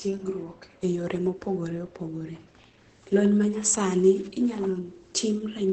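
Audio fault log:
throughout, Opus compression: the speech sounds muffled and hoarse with nothing above 8.7 kHz, likely Opus in its SILK speech mode at a rate fitting about 12 kbps. A spectrogram shows a hard ceiling at 8.7 kHz.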